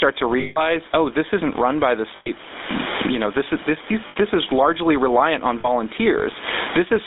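The speech runs through the GSM full-rate codec, which rebuilds the voice from a vocal-tract model fed with coarse, regularly spaced pulses and squeezes it into a 250 Hz to 3.7 kHz line band. The damage is plainly audible as a buzzy, gravelly roughness with no top end, which fits the 13 kbps full-rate coder. Throughout, the level is likely being hauled down by a fast limiter or compressor behind excessive gain, with the gain swinging by about 25 dB, so loud and soft parts end up closer in level, leaving the speech squashed. Lost GSM frames occur four times, and each is covered by repeating the last good frame, which gives a rough, metallic ring. The first runs from 0.4 to 0.75 s, a 160 ms hold. The second, from 2.16 to 2.3 s, is a 100 ms ring just after "isn't run by the". The third, from 4.08 to 4.17 s, lasts 80 ms and sits between "this is this these" and "this is largely reliant". The last, from 5.6 to 5.68 s, is a 40 ms blip after "is largely reliant on". 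The room noise sits about 30 dB below the speech.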